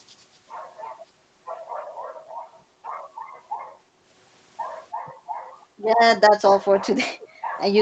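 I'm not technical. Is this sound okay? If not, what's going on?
No. At 7.22 to 7.28 s, near the end, a faint, brief repeat of the voice arrives about a third of a second late. This is an echo leak, likely from the other side's loudspeaker being picked up by its microphone and not fully cleaned out before being sent back.

Right after, from 7.28 to 7.45 s, the quiet room sound behind the voice dips for a moment and then returns. This is background gated by the echo canceller: while the loudspeaker was playing, the canceller briefly turned the microphone down to block the echo, taking some room sound with it.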